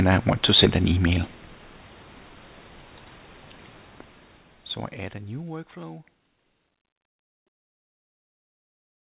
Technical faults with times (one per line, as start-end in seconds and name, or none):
none